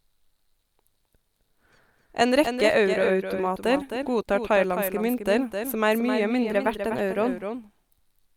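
A doubled audio track runs through the whole clip: a second, full-band copy of the speech trails the original by roughly 300 ms, about 10 dB quieter, with no decay or room colour. It is likely captured twice, once through a slower path, so every syllable gets a flat echo.

A drift correction step follows from 6.44 to 7.28 s, just after "som er mye". Playback speeds up by 5.54% and the pitch rises 93.3 cents, nearly a semitone, then snaps back, likely a clock-matching resampler adjusting its buffer in one jump.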